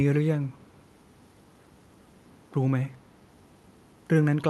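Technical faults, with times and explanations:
0.44 to 0.84 s and 2.93 to 2.97 s, echo leak: a faint copy of the speech returns about 248 ms late, about 35 to 40 dB below the direct sound. This is likely an echo canceller on a loudspeaker end letting residual microphone pickup through.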